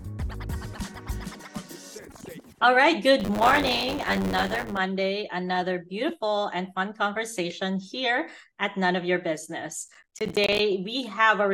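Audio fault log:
3.19–4.77 s, buffer tearing: a robotic, rattling buzz at 100 Hz sits under the sound and is heard only where there is signal. The program filling the ring buffer and the hardware reading it have drifted so their positions cross every period. Roughly a fifth of each 10 ms buffer replays audio about 20 ms old, with hard splices at both ends. The waveform shows a step discontinuity every 10 ms. The spectrogram shows evenly spaced thin vertical lines and a comb of 100 Hz harmonics.
9.88–10.59 s, processor overload crackle: a short burst of gritty crackle rides on the sound and stops once the processing load eases. The processor fell behind on a run of small buffers, about 10 ms each, missing around twenty of them. Each buffer it missed came out as silence, so the sound is chopped by brief, hard-edged dropouts. The waveform shows irregular flat gaps with abrupt edges, and the spectrogram shows scattered broadband vertical streaks across this stretch.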